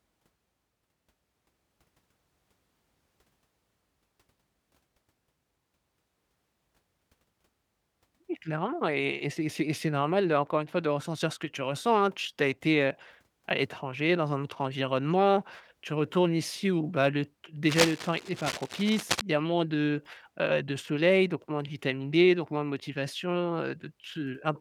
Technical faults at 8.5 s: none

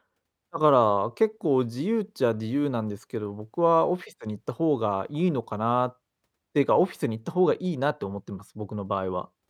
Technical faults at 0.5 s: none

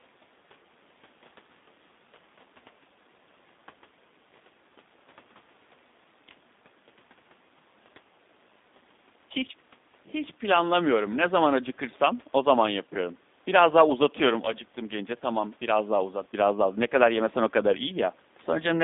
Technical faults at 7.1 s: G.729 codec

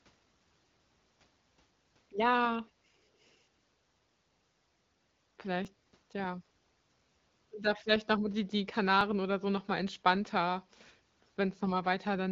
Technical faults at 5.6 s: dropped buffer (overrun)

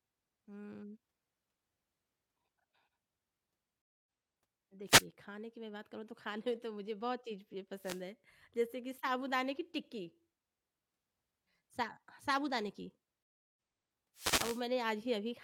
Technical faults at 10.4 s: none

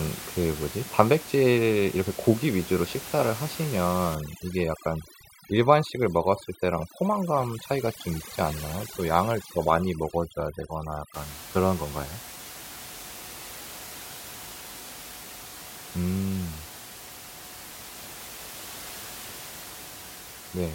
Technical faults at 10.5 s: overdone noise removal

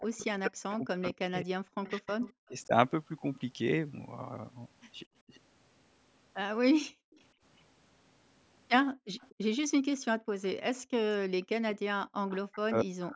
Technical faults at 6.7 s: speech suppressed in double talk

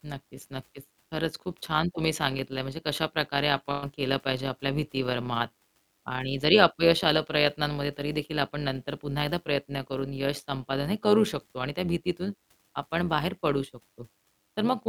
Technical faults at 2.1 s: overlap-add ripple

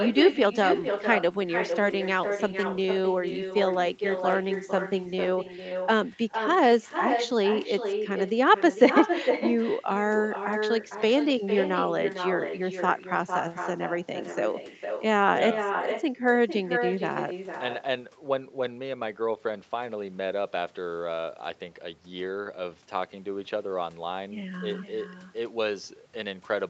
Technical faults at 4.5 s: echo with no canceller

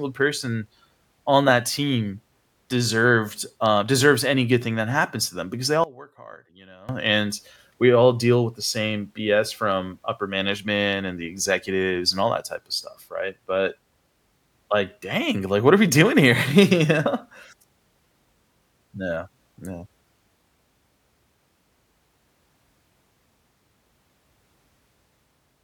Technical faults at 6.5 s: one channel inverted

